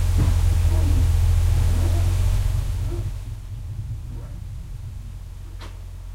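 Zipper noise runs from 2.32 s to 3.53 s in this recording of sounds. Over that stretch the level drops by roughly 15 dB, but instead of gliding down it falls in discrete 2 dB steps at about seven per second. Each unsmoothed jump puts a small click into the waveform, so a ticking, zip-like texture rides on the sound while the fade happens, the likely result of gain being updated per block with no interpolation.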